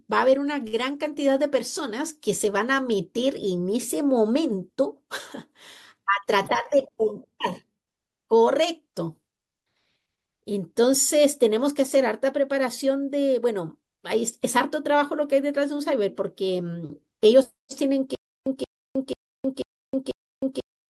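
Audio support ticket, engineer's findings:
Short stall from a late packet, 0.67–0.76 s. Late packet left the jitter buffer empty. Receiver held the last sound about 56 ms until arrival, then resumed at the same point. Nothing lost, held sound with slight buzz or dip.

Stutter with silent gaps, 18.15 s to end of clip. A 177 ms burst repeats every 490 ms with 313 ms of digital silence between. Likely a stalled player or stream replaying its last fragment on each retry. Intended audio lost.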